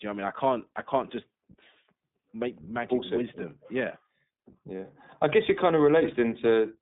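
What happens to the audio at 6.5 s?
At 6.5 s the speech is still passing through the iLBC codec, as it does throughout. The band is cut to about 150 Hz to 3.7 kHz. Each short frame is coded on its own, which fits 20 ms frames at 15.2 kbps. The result sounds rough and plainly synthetic.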